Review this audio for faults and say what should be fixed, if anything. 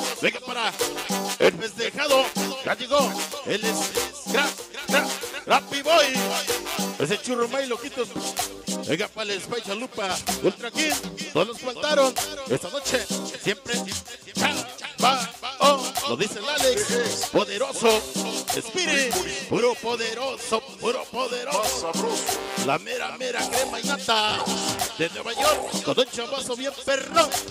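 Nothing here needs fixing, so you can leave this one as it is.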